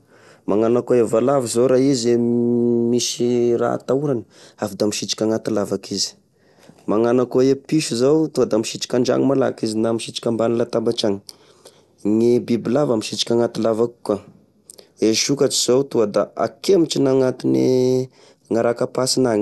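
The clip is speech, and for its whole length it carries the sound of MP2 compression. Nothing is present above about 12.2 kHz, so the top end is dull, and the remaining bands flicker in and out with a gurgling, granular roughness that is plainly audible. That is the sign of an MPEG Layer II encoder starving its 32 sub-bands of bits, likely at a low rate in the region of 80 kbps.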